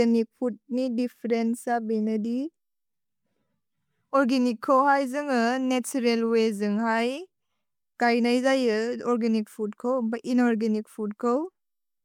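Nothing in the recording trips up the ear, as the speech just runs along without any glitch, dropout or hiccup worth flagging.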